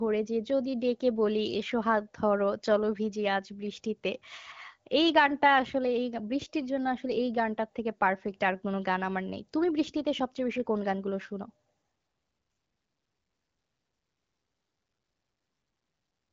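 No technical faults occur in this speech recording, which has the limited top end of an AMR wideband (HD Voice) call, with nothing above about 7 kHz.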